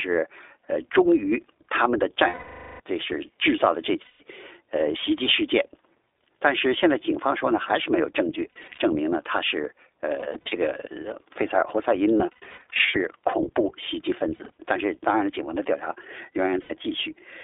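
Throughout, the iLBC codec narrows the speech to about 300 Hz to 3.6 kHz. It sounds rough and synthetic, which fits a 15.2 kbps mode with 20 ms frames.

Lost iLBC frames occur at 2.28 to 2.80 s, 4.02 to 4.22 s, 8.52 to 8.79 s, 10.20 to 10.55 s, 12.18 to 12.98 s, 14.36 to 14.50 s and 16.62 to 16.72 s. At 8.52, 10.20, 12.18 and 14.36 s the losses come as brief scattered runs. The decoder repeats the last pitch cycle with noise, so each gap sounds like a held, buzzy vowel. The voice returns cleanly right after.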